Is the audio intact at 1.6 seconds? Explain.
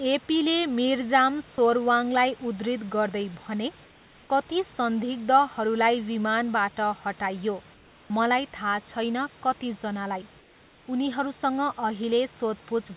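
No. At about 1.56 to 1.58 s the sound briefly gives way to steady noise, likely sound dropped by the voice detector and replaced with comfort noise.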